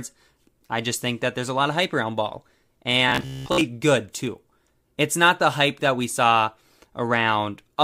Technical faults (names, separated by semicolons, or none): robotic sound from repeated short buffers